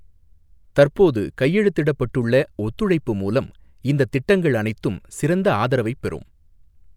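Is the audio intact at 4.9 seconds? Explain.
No. Dropped samples at 4.90 s produce a single sharp click in the speech. The likely cause is a tiny gap, a fraction of a millisecond, where the waveform jumps straight to a later value. That step is too brief to remove any sound but shows as a thin vertical line across the spectrum.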